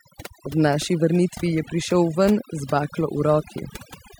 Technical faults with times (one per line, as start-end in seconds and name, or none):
0.00-4.20 overdone noise removal